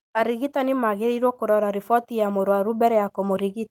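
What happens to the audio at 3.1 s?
At 3.1 s the speech is still swelling from automatic gain rising, which runs from 0.14 to 3.63 s. The gain control raises its level slowly, about 8 dB overall, lifting voice and background together.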